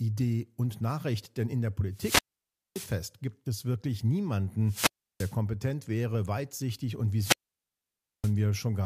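The analogue wireless microphone's radio signal weakens three times in this speech recording, and each time the receiver's squelch closes and mutes the output: a wireless microphone squelch dropout. Each one comes as a short swell of hiss, then a near-silent hole, then the voice returning. The first runs from 1.92 to 2.98 s after "in der", muting for about 0.57 s before "gibt es wirklich". The second, 4.65 to 5.36 s, mutes for about 0.34 s before "wäre weitsichtig und". The third, 7.17 to 8.34 s after "wäre weitsichtig und", mutes for about 0.92 s.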